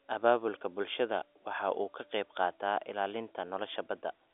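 No technical faults turn up in this speech, which carries the narrow band of ordinary G.711 telephone coding.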